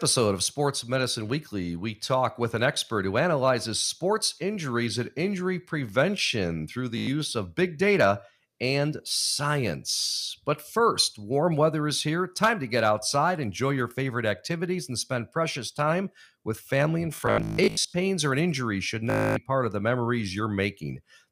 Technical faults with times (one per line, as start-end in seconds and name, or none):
6.98-7.07 Bluetooth stutter
17.15-17.94 Bluetooth stutter
19.10-19.37 Bluetooth stutter